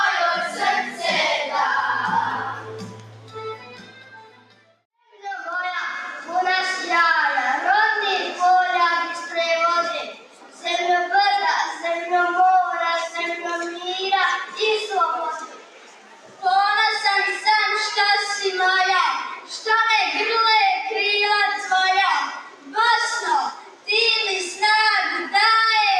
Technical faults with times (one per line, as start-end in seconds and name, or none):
0.00-26.00 noise suppressor applied to music or sounds
0.50-1.03 sound cut by the noise suppressor
2.38-5.24 sound cut by the noise suppressor
10.14-10.65 sound cut by the noise suppressor
15.45-16.43 sound cut by the noise suppressor
19.36-19.59 sound cut by the noise suppressor
22.37-22.73 sound cut by the noise suppressor
23.52-23.88 sound cut by the noise suppressor